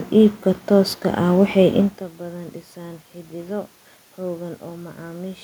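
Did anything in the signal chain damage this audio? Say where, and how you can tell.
No, nothing in the signal chain damaged this audio.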